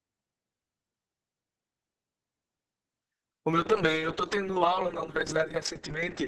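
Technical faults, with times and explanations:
3.51 to 6.27 s, call bitrate drop: the speech turns rough and watery and its top end narrows from 12 kHz to 8 kHz, pointing to the encoder falling from about 32 to 8 kbps. It stays at that floor for 1.76 s. Unlike a plain low-pass filter, coarse coding grain arrives with the duller sound. Unlike packet loss, there are no gaps or dropouts.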